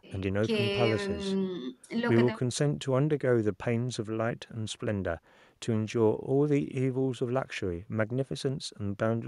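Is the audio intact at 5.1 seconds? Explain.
Yes, the speech runs cleanly through 5.1 seconds with no audible fault at that moment.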